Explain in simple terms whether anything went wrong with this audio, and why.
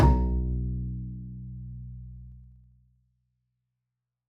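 From 2.28 to 3.16 s, a fast ticking or zipping rides on the sound as it gets much quieter. This is zipper noise: the volume drops in about thirty small jumps per second instead of gliding, and each jump clicks.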